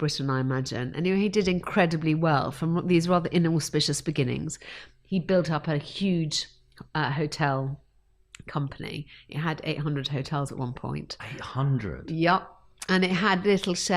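No technical faults can be heard anywhere in the signal.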